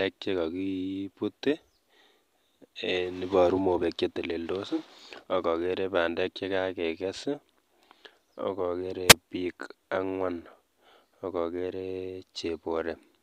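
At 9.08 to 9.15 s, before "biik ang'wan", a wireless microphone squelch dropout: the fading radio signal trips squelch, leaving a hiss smear, then a 1.77 ms near-silent gap.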